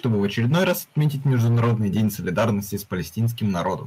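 An input level likely set too high drives the converter into microphone overload from 0.04 to 2.08 s, about 7 dB past its limit, so roughly a tenth of the samples are flattened and the loudest syllables take on a harsh, crackling edge. At 0.06 s the software likely answers the overload by stepping the microphone volume down, cutting input gain by 2 dB at once, so voice and background dip together. Overload returns at 2.37 to 2.75 s, about 6 dB over, and at 3.2 to 3.69 s, about 3 dB over, clipping fewer peaks but leaving the same gritty tops.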